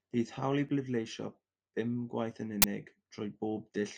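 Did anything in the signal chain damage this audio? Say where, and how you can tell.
Yes. At the driver or buffer stage, an uninitialised buffer plays from 2.62 to 2.64 s as a sharp, loud burst of digital noise in the speech. One 20 ms block went out before audio was written to it, so leftover memory was read as samples.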